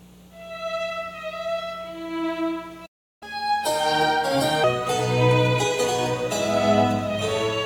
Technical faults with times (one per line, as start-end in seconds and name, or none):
2.86-3.23 playback stall
3.23-4.64 catch-up at higher speed